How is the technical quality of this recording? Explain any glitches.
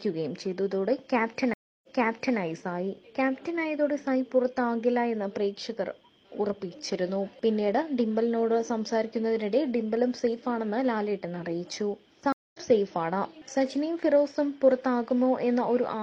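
The recording has two stream reconnect glitches. At 1.54 to 2.39 s, the connection dropped and a fresh decoder restarted mid-stream: the audio goes silent for 0.29 s, then resumes 0.56 s earlier, repeating a stretch. At 12.32 to 12.59 s, another reconnect silences the audio for 0.22 s, then it picks up about a fifth of a second later, skipping ahead.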